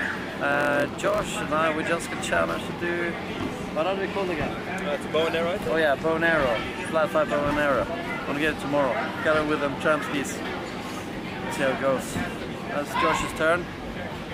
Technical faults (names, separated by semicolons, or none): block size mismatch (padded)